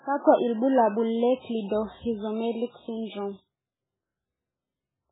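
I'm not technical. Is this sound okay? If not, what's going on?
No. Throughout, the speech sounds dull and watery, with nothing above about 3.8 kHz, likely heavy MP3 compression. Unlike simple muffling, it also swirls and warbles.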